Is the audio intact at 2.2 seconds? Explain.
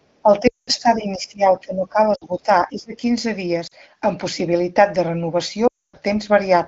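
No. At 2.2 seconds two faults overlap. From 1.61 to 2.48 s the sound dips by up to about 10 dB over most of that stretch. This is likely speech suppressed in double talk: with both sides talking at once, the echo canceller treats the near talker as loudspeaker echo and turns it down. It sounds like a level-driven ducking that follows the other side's activity, not like a decoding glitch.

Inside that dip, from 2.15 to 2.24 s, lost AMR speech frames remove 60 ms, which fits three 20 ms frames. The AMR-WB decoder, running at 15.85 kbit/s, fills the gap by repeating its last good pitch and vocal-tract settings at falling gain. The result is a short drop to near silence within two frames, with the voice coming back weak or rough for a moment, not the longer suppression around it.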